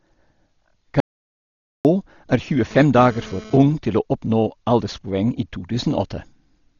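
From start to finish, the speech sounds dull and rough, with nothing above 7 kHz. This is most likely heavy Dolby Digital compression, which fits a very low 32 kbps stream.

From 1.00 to 1.85 s the sound cuts to total silence, losing about 0.85 s. This is an audio dropout to silence, likely a lost input.

From 2.71 to 3.57 s, a harsh GSM phone buzz at 217 Hz intrudes. It sits about 20 dB below the speech and comes and goes with the phone's data bursts.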